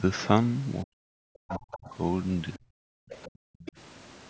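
From 0.84 to 1.94 s the speech is suppressed in double talk, most likely because both ends were talking at once and the echo canceller could not tell the local talker from its loudspeaker echo, so it pulled everything down. Across roughly a second the speech dips and breaks up, falling by as much as about 40 dB at its deepest. On a waveform the envelope caves in and recovers in jagged steps; on a spectrogram the harmonics thin out and break into gaps.

Inside that stretch, from 1.48 to 1.77 s, the other side's voice leaks through at about 10 dB below the speech. This is likely residual loudspeaker echo that the canceller failed to remove. It appears as a second, fainter set of harmonic traces overlapping the main ones.

Brief leaks recur at 2.54 to 2.59 s (about 25 dB down), 3.1 to 3.28 s (about 20 dB down) and 3.6 to 3.72 s (about 15 dB down). Each is a faint scrap of foreign voice, visible as weak, detached harmonic fragments.

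From 2.57 to 2.94 s, speech suppression in double talk hits again, likely for the same reason. The speech sags by up to about 40 dB for around 0.3 s, showing as a notch in the envelope with blank patches across the spectrogram. Everything above 8 kHz is empty throughout, consistent with the call's bandwidth.

From 3.29 to 3.6 s the background is gated by the echo canceller, which clamped the microphone while the loudspeaker played. The room tone drops by about 40 dB for around 0.3 s and comes back when the canceller releases. On the waveform the noise floor flattens to near silence. On the spectrogram the broadband haze vanishes in a clean-edged dark block and then returns abruptly.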